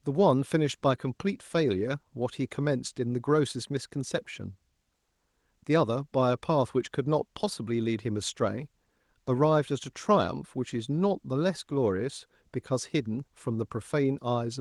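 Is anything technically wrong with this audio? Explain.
No, nothing is technically wrong with this speech: it carries the ordinary sound of a call path, with the top end stopping at about 12 kHz in a way that fits an Opus codec running at around 32 kbps, and no faults are present.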